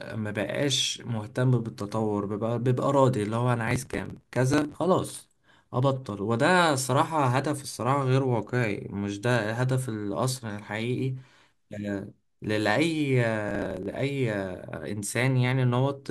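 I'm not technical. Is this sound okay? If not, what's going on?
No, there are two rough patches in this speech clip. From about 3.68 to 4.77 s, and again from 13.49 to 13.94 s, you'll hear a gritty crackle riding on the sound. That's processor overload crackle: the computer got too busy to deliver each tiny slice of audio, just a few milliseconds long, on time. It dropped many slices again and again, and each one left a little hard-edged gap. The shorter second patch clears up as the load passes.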